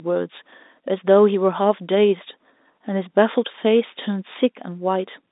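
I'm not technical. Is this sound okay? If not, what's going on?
Yes, nothing is wrong; it's ordinary phone-call sound.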